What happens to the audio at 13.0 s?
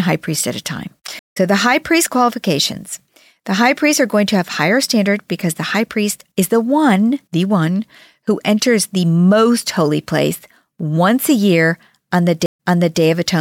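A stream reconnect spans 12.46 to 13.01 s. The connection dropped, leaving a 128 ms silence, and a fresh decoder resumed about 0.42 s earlier, so the sound repeats. Waveform and spectrogram show a blank gap, a faded-in restart, then duplicated patterns.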